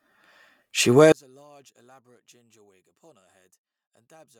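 One channel inverted from 1.12 s to the end: speech drops about 36 dB to a faint residue, likely because reversed polarity cancels it in mono.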